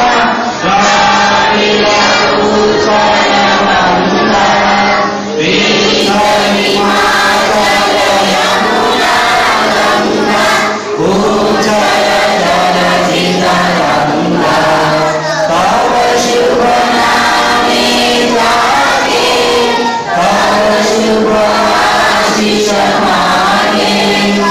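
Until 6.0 s, the adaptive stream is starting at a low bitrate. Nothing sounds above 7.6 kHz and artefacts are stronger, fitting 32 kbit/s MP3. Quality then jumps without a gap.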